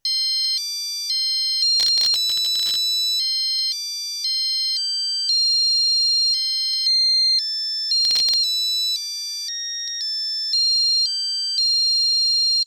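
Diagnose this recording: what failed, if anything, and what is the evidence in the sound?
The failure sits at the driver and buffer stage: processor overload crackle from 1.80 to 2.76 s and again from 8.05 to 8.34 s. Each burst is a gritty tearing laid over the sound, made of many tiny hard-edged repeats of old audio, which points to buffers of well under a millisecond missing their deadlines one after another. Network packet loss would leave longer, sparser gaps or smeared concealment rather than this dense, fine-grained crackle that stops cleanly when the load passes.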